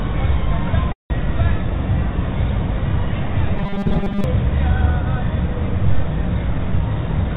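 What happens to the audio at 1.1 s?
At 1.1 s the sound is caught in a call audio freeze running from 0.92 to 1.21 s. The last sound carries on as a fading buzz or hiss, then about 160 ms of silence, and the audio resumes exactly where it stopped, roughly 180 ms late, with nothing lost. The likely cause is delayed packets leaving the jitter buffer empty.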